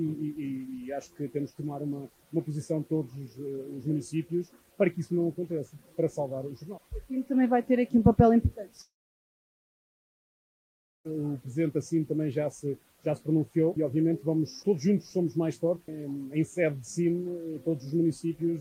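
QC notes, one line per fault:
8.81–11.11 s, long network dropout: the sound decays into a fading buzz or hiss, then 2.15 s of silence; audio likely stopped arriving, and resumes with that stretch lost.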